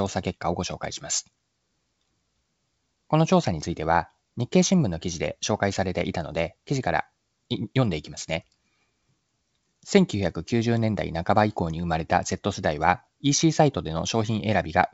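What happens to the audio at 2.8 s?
Nothing goes wrong at 2.8 s. The speech there passes intact through G.722 wideband telephone coding at 64 kbit/s, with no break or distortion at that point.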